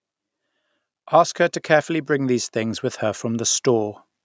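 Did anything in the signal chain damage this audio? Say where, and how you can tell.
Yes. Call processing: automatic gain rising from 1.11 to 3.97 s. Speech and background swell together by about 5 dB as the gain control boosts a quiet input.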